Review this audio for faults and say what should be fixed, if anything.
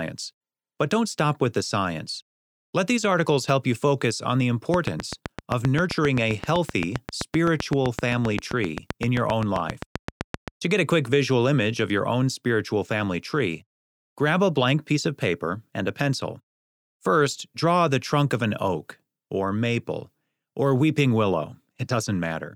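A train of clicks runs from 4.74 to 10.49 s, right after "you focus on the": about fifty near-identical pulses at a steady 7.7 per second, peaking about 15 dB above the speech, likely interference from nearby equipment. Unlike random crackle, the pulses keep their shape and rhythm even through pauses. Keep phones and switching supplies away from the interface and cables.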